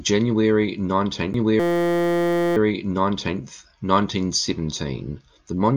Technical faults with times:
1.33 CD skip
1.60-2.57 system hang loop

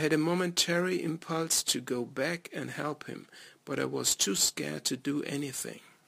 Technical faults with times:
0.00-6.07 crude rate conversion

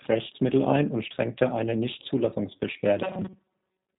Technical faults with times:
0.00-3.98 G.729 codec
3.02-3.98 robotic sound from repeated short buffers

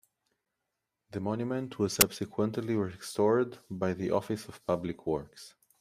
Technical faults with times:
2.01 file tags played as audio

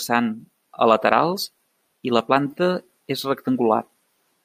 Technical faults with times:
none

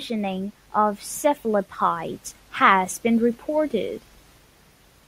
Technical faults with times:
none

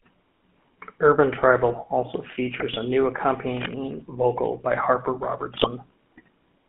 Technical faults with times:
0.00-6.68 GSM full-rate codec
2.60-2.76 GSM bit errors
3.57-3.73 cable scratch noise
5.54-5.68 GSM bit errors

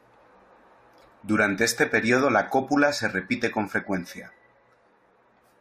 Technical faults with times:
none

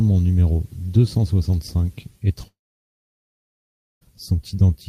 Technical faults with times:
2.47-4.03 long network dropout

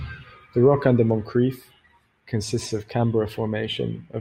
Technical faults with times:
none

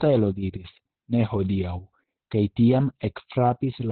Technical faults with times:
0.00-3.91 Opus voice compression

